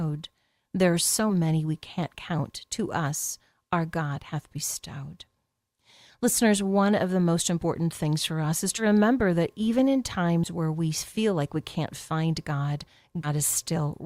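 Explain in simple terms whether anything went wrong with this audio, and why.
Compressed frames skipped: 10 ms blocks of the stored speech were lost or rejected by the decoder, so playback jumps ahead. A few hundredths of a second vanish: 7.62 s after "one of the most", 8.77–8.83 s, 10.43–10.48 s and 13.23–13.28 s.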